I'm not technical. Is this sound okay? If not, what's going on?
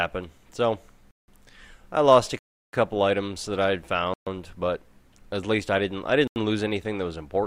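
No. There are four blocks of digital silence, at 1.11 to 1.28 s, 2.39 to 2.73 s, 4.14 to 4.27 s and 6.27 to 6.36 s. The sound cuts to total silence rather than fading, likely because the player didn't deliver audio in time.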